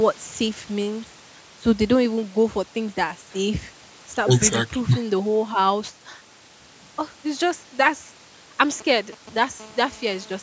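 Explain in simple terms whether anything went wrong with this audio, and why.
Two kinds of radio interference from a nearby mobile phone get into the speech near the end.

From 8.81 to 9.38 s there are GSM signalling bursts. A 2G phone is sending short groups of radio pulses, as it does when setting up a call or message. The audio circuitry turns those pulses into sound: a galloping dit-dit-dit of short buzzes.

From 9.60 to 10.38 s there is GSM phone buzz. The phone is now in a call and transmitting continuously at 217 pulses per second. That produces a steady, hard, raspy buzz at 217 Hz, quieter than the earlier bursts and unrelated to the speech.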